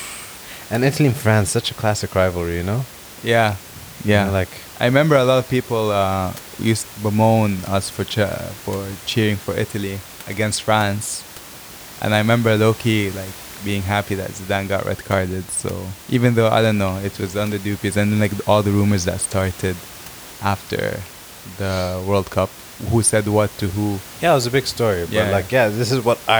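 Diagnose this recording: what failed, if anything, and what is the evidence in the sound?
Nothing failed at any stage of the chain; the only thing beneath the speech is the room's own background noise, sitting about 19 dB down, which belongs to the recording itself.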